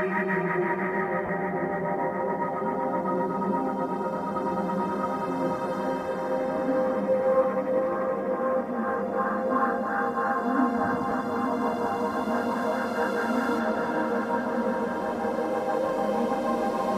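At 1.26 to 1.29 s and again at 11.11 s, lost LE Audio frames break the sound: the first gap lasts about 30 ms, which fits three 10 ms frames, and the second about 10 ms. The decoder fills each hole by replaying the last spectrum with scrambled phase, so steady tones turn into a brief noisy smear. Unlike a dropout or a click, nothing goes silent or spikes; the texture just turns hissy.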